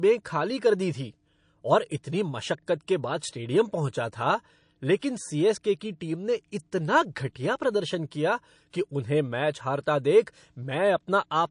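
Across the whole recording the speech carries plainly audible MP3 compression damage, likely from an encoder squeezed to a low rate, which fits roughly 40 kbps. With so few bits, the treble is cut off and weak frequency lines drop in and out between frames. The result is a watery, swirling texture, with metallic chirping on sibilants and softened consonant onsets.

Pre-echo appears three times: from 3.20 to 3.22 s, from 4.99 to 5.02 s, and from 8.70 to 8.73 s. In each case a short hiss of 21 to 30 ms runs ahead of a sharp onset, and the noise sits about 12, 18 and 17 dB above the quiet moment it fills. The spread fits long transform blocks of about 52 ms with no switch to short blocks. Quantisation noise sized for the loud attack leaks backward into the gap before it, so each onset is smeared.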